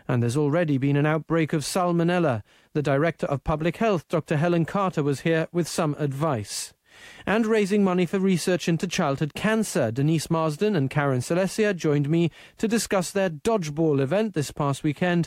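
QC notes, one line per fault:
Nothing to flag here; the speech comes across without a single technical problem worth noting.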